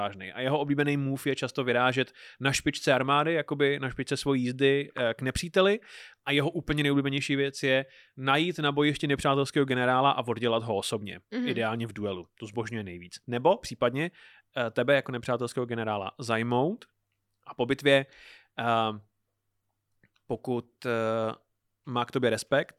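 Nothing goes wrong anywhere in this recording, so there's no fault to point to at any moment along the way.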